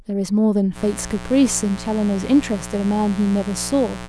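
From 0.74 s to the end, a mains buzz sits under the speech: a steady, raspy drone built on 60 Hz, fairly prominent at roughly 15 dB below the signal. Switching spikes twice per cycle push harmonics into several kHz, which separates it from a smooth, low hum.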